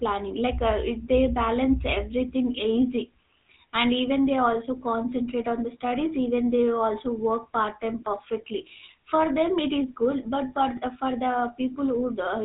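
From start to finish the speech carries the GSM full-rate codec's damage, plainly audible throughout. The codec rebuilds each voice from a vocal-tract filter driven by regular pulses and keeps only every third excitation sample, a coarse rate that fits the 13 kbps full-rate mode. That thin excitation gives a buzzy, gravelly roughness, and nothing survives above 4 kHz. A simple 4 kHz low-pass would muffle the sound but leave it smooth, with no grit.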